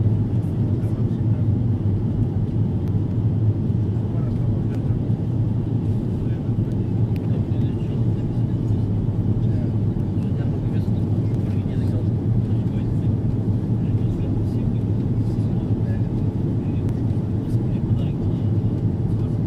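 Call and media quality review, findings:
Five sharp isolated clicks at 2.88, 4.75, 10.23, 11.35 and 16.89 s. Likely dropped samples: under a millisecond of stream missing each time, so the waveform steps abruptly to a later value. Spectrogram shows thin full-height vertical lines at each time.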